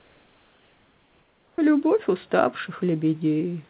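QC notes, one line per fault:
0.00–1.58 s, comfort noise in place of the background: for the first 1.58 s, before the speech begins, the room tone is a smooth, unchanging hiss with no texture, about 3 dB quieter than the background heard later and about 39 dB below the loudest sound. This is likely discontinuous transmission, where the receiver plays synthetic noise while nothing is sent. The noise is band-limited like the rest of the audio, with nothing above 4 kHz.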